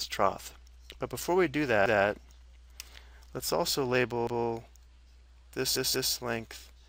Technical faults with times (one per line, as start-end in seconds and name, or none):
1.86-2.04 repeated buffer
4.27-4.46 repeated buffer
5.76-6.13 repeated buffer